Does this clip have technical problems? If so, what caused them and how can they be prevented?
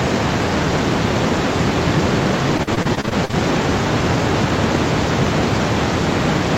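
Yes, repeated packet loss (robotic sound) from 2.57 to 3.35 s: ten short holes, the longest 42 ms, patched by stretching prior sound, giving choppy sound with pieces missing rather than the clean silences of plain dropouts. A steadier network connection or a larger jitter buffer would prevent it.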